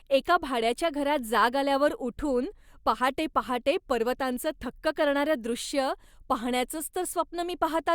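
No technical faults are audible.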